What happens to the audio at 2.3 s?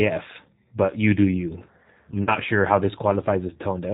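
VoIP packet loss concealed by the speech codec affects the audio from 2.23 to 2.36 s, between "you do you I'm" and "sure how this". About 40 ms of audio went missing, which fits two dropped packets. The decoder filled the gap by repeating its last pitch and vocal-tract filter at falling gain, so the sound smears into a buzzy tone or coloured noise that fades and stays weak until the speech recovers. On a spectrogram this shows as a flat, unchanging pattern with no formant movement. In the waveform the envelope decays smoothly.

The G.729 codec runs through the whole clip, including this moment. It rebuilds speech at 8 kbit/s from a synthetic filter-and-pulse model, which makes the voice plainly rough and slightly artificial. A spectrogram shows nothing above 4 kHz.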